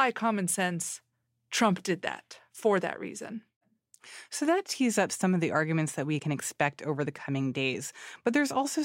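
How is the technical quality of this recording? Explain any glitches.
Nothing here trips up the listening: the speech comes through steady, with no glitches to point to anywhere along the way.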